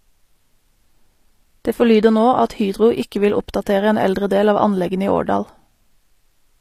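Throughout, the speech carries HE-AAC compression, likely from a low bitrate around 24 kbps: treble rebuilt from copied lower bands turns s sounds gritty and metallic, unlike plain lowpass dullness, with nothing above 14.9 kHz.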